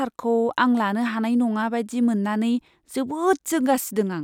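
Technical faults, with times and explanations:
No technical faults can be heard anywhere in the speech recording.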